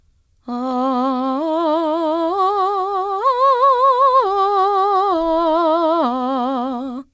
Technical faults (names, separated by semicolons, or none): none